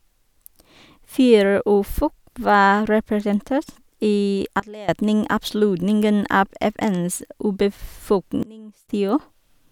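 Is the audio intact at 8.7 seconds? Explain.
No. From 8.43 to 8.89 s the speech and its background noise drop abruptly together by about 23 dB, then snap back, a sudden gain jump. The likely cause is a digital gain change applied between adjacent samples with no smoothing ramp.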